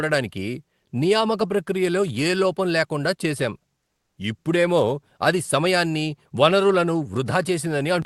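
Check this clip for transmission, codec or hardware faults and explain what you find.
One fault stands out: comfort noise in place of the background, from 3.91 to 4.15 s, between "ఏ లోపం లేకుండా చేసాం" and "ఇప్పుడేమో అది సమయాన్ని వనరులను". For about 240 ms the real background gives way to a flat, featureless hiss, roughly 2 dB quieter. The likely cause is discontinuous transmission: the sender paused and the receiver filled the gap with synthetic noise. The call codec limits the band to about 12 kHz throughout.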